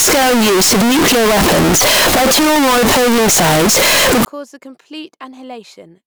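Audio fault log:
0.00–4.25 s, float read as integer: the 32-bit float samples were likely read as 32-bit integers, so sign and exponent bits set each value, giving a near-square wave at an almost fixed, high level, very loud and harsh with background noise level with speech until "cause the".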